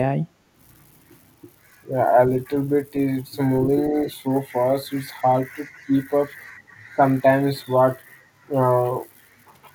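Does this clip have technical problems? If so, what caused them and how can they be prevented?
Yes. Speech suppressed in double talk: the speech dips slightly, at 3.89–3.95 s and 6.96–7.0 s. Both sides likely talked at once, so the echo canceller turned everything down. Better full-duplex echo cancellation or a headset prevents it.

Echo leak: a faint copy of the speech returns 221 ms late, at 5.23–5.27 s and 5.73–5.85 s, about 30 to 35 dB down. A loudspeaker's echo likely got past the far end's canceller. Using headphones there prevents it.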